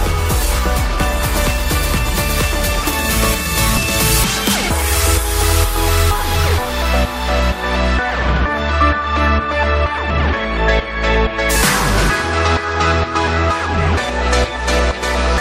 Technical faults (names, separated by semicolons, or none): compressed frames skipped